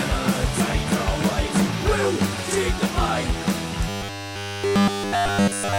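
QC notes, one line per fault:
3.89–5.79 s, robotic sound from repeated short buffers: the sound collapses into a rigid, metallic buzz pitched at 100 Hz that runs to the end of the clip. It only loosely tracks the underlying audio, with essentially every moment replaced by repetition. The likely cause is new audio arriving too seldom, so playback loops the last block of about 10 ms while fresh material is skipped, and that fixed loop period imposes the steady 100 Hz tone.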